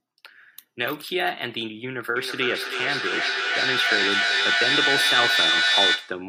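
Feedback echo between two devices begins at 2.16 s and runs to the end of the clip. Two devices in the same room are joined to one call, so one loudspeaker replays what the other microphone sent, and that microphone captures it again. Each echo canceller removes only its own device's playback, so the sound recirculates at a spacing of roughly 300 ms, growing thinner and more ringing. The loop builds until the repeats reach about 5 dB above the speech itself.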